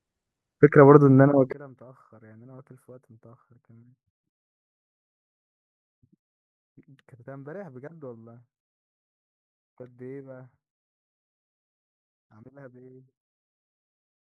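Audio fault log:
1.53 s to end: one channel inverted. The speech drops about 28 dB to a faint trace, likely because one channel's reversed polarity cancels the shared centre when summed to mono.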